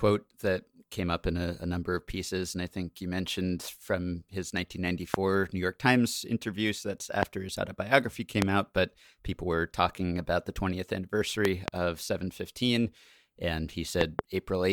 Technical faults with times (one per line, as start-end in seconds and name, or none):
5.14-5.16 loud pop
7.23-7.25 loud pop
8.42-8.44 loud pop
11.45-11.70 loud pop
14.01-14.21 loud pop